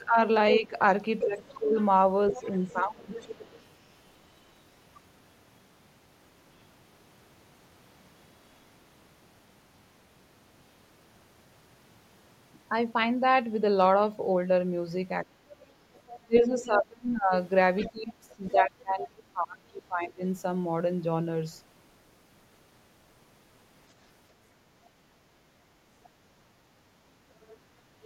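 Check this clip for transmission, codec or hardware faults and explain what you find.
Two echo-cancellation faults affect this speech clip: the talker's speech is suppressed during double talk, and the other side's voice leaks through.

Speech suppressed in double talk, 0 to 3.1 s and 15.24 to 20.24 s: the echo canceller likely could not tell the talker from the loudspeaker echo while both spoke, so it attenuated everything. The speech dips by around 15 dB early on, for about a second and a half in total. Later it drops by roughly 30 dB for about four seconds.

Other side's voice leaking through, 1.21 to 3.63 s, 15.95 to 16.66 s, 17.81 to 19.08 s, 26.04 to 26.09 s and 27.42 s to the end: echo cancellation likely left residual loudspeaker pickup in the microphone signal. A second voice sits well below the talker, loudest at 17.81 to 19.08 s (around 10 dB down) and faint near the end.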